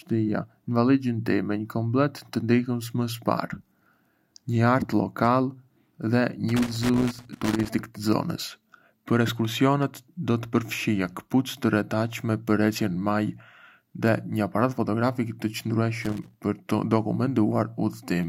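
Speech, interrupted twice by loose connector crackle, from 6.49 to 7.70 s and again from 16.02 to 16.40 s. A worn or dirty contact is making and breaking as it shifts, chopping the signal into an irregular burst of scratchy crackle.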